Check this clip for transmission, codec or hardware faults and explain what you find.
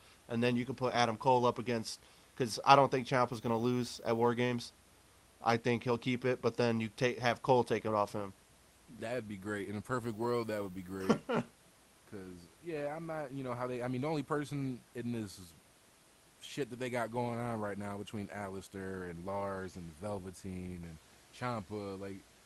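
Nothing found: the speech comes through the Opus call path intact, the band topping out around 12 kHz as that codec setting implies, with room noise sitting about 33 dB below the speech.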